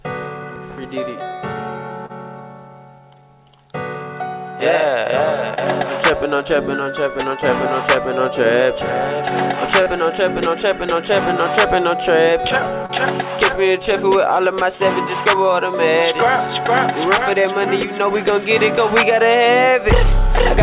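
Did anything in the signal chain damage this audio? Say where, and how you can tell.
Yes, at the network stage: short concealed packet loss at 2.06, 5.54, 9.83 and 12.86 s. Each is a brief smear or wobble where about 30 ms failed to arrive in time. The receiver extended the preceding sound to fill the gap, then blended back into real audio.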